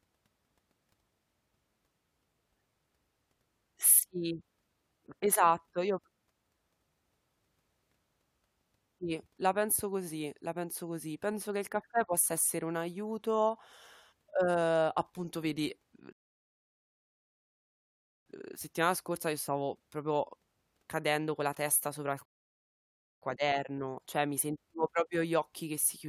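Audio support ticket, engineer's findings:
Rebuffering stall at 16.13–18.26 s and 22.25–23.22 s. Speech cuts to silence, then resumes exactly where it stopped. Nothing lost; about 2.1 s and 1.0 s added. Player buffer ran dry; playback paused until more data downloaded.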